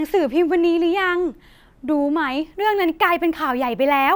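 From 2.43 s to the end, the speech picks up a gritty, inharmonic fizz riding on louder and brighter sounds, about 25 dB below the signal. This is crude rate conversion: samples were simply repeated to reach a higher rate, which fits a 32 kHz to 48 kHz change.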